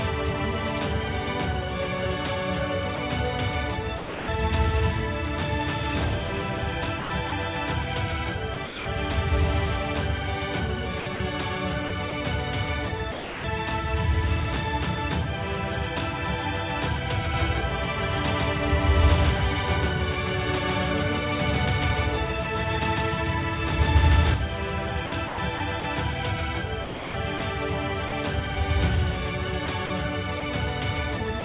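Sound chopped by the voice detector at 2.96–4.28, 7.0–8.86 and 11.0–13.44 s: edges drop into comfort noise, likely from sender voice-activity switching. From 17.34 to 24.34 s a doubled audio track appears, an equally loud, dry copy around 150 ms late, likely a second capture path. The same choppy comfort-noise fill returns at 25.06–28.12 and 29.66–31.42 s, over the call path's band limit at 4 kHz.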